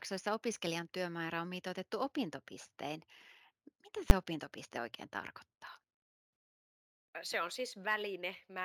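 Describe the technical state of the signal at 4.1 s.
Invalid numbers at full scale occur at 4.1 s, just before "opintopiste oikein tarkoittaa". A calculation in the processing chain produced infinite or invalid values, and these were forced to the largest positive or negative value, pinning the waveform flat at one extreme value, far beyond the speech peaks, for a 10 ms block. Because the block is so short, the onset and release pops merge into a single very loud bang.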